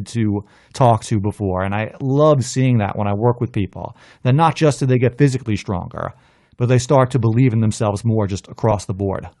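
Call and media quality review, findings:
Breathy, grainy edge on the speech for the full clip, with hiss-like texture in place of clean upper harmonics. Likely cause: Bluetooth LC3 compression, with upper spectrum zeroed and noise-filled. Damage plainly audible, consistent with an LC3 stream around 48 kbps.

LC3 frames of 7.5 ms. Noise fill is audible as a constant rough sheen rather than distinct dropouts.

Lost LE Audio frames at 6.40 s: brief noisy smear replacing the speech. The decoder reused the previous spectrum with randomised signs to cover the gap. Duration fits two consecutive 7.5 ms frames, about 15 ms total.

Lost LE Audio frames at 8.71–8.73 s: a shorter noisy blip from the same concealment, repeating the prior spectrum with random signs. The gap fits a single 7.5 ms frame. Both losses are too short to reach the fade-to-silence stage.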